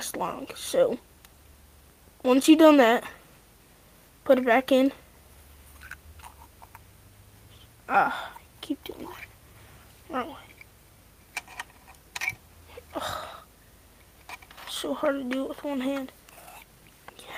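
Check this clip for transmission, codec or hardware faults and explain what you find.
No faults turn up anywhere in this clip. Nothing in the audio calls for an explanation or a fix.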